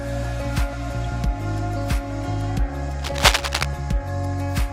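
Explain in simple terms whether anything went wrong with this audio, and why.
Cable scratch noise appears from about 2.99 to 3.65 seconds. For roughly two-thirds of a second, a rough, crackling rustle sits on top of the sound, about as loud as the sound itself. This is likely caused by a worn cable, plug or control being moved. When its metal contacts shift and rub, the electrical connection keeps flickering between good and bad, and those rapid changes come through as scratchy bursts of noise.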